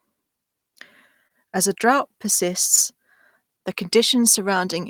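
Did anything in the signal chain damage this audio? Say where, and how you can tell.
Yes: short concealed packet loss in the network. 20 ms went missing at 1.27 and 2.76 s; the decoder extended the preceding sound, leaving brief smears.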